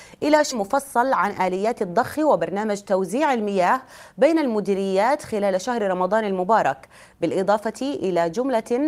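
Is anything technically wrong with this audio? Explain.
Yes, there are two faults.

At 0.51 s there is a skip ahead. A stretch of about a third of a second was discarded, in transit or by an overflowing jitter buffer, while later audio was already queued. Playback leaps forward with no gap, splicing the two sides together almost directly, so the sound jumps abruptly. On a waveform there is a sudden discontinuity with no silence. On a spectrogram the harmonic patterns change instantly at a vertical seam.

From 0.60 to 2.87 s there is a jitter buffer speed-up. The buffer was holding more audio than its target, so the receiver trimmed short pitch-period-sized pieces again and again, removing roughly a tenth of a second in total. The audio runs at 105% speed with unchanged pitch and sounds slightly hurried. On a spectrogram the harmonics stay at the same frequencies while events arrive closer together. 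On a waveform the cycles look intact but the envelopes are compressed in time.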